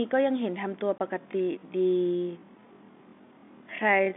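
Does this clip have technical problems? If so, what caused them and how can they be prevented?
Yes, two things stand out. First, packet loss filled with silence: at 0.98 s there's a short dropout, a hard-edged hole of about 20 ms that fits a single lost packet. Instead of concealing the gap, the receiver just played nothing. To prevent it, enable packet loss concealment in the receiver and use a jitter buffer deep enough to ride out late packets.

Second, there's a time-stretched section from 1.17 s to the end. The pace suddenly drops to roughly half speed, about 0.533 times, but the pitch stays put. That's the signature of software stretching audio to fill a length by repeating short slices, which is why everything after that point drags. The likely cause is a processing step forcing the recording to a target duration. To prevent it, trim or pad the audio to length instead of stretching it, or keep any tempo change small.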